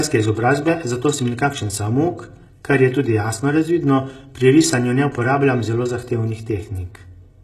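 From start to finish, the speech carries channel delay (comb filtering). One channel runs roughly 3 ms behind the other, and when the two are folded to mono, the shared content cancels at evenly spaced frequencies, with the first notch falling near 200 Hz and further notches repeating at regular intervals above it. The result is a hollow, slightly phasey tone, with fixed dips that do not move as the speech changes.

Also present throughout is codec damage that is plainly audible, and HE-AAC compression is the likely cause. The upper band is not the original signal but a rebuilt copy of lower bands, shaped only coarsely, so its harmonics fail to line up with those below the crossover. Sibilants come out gritty and metallic. Nothing remains above 12.3 kHz, and the degree of damage fits a very low bitrate in the region of 16 kbps.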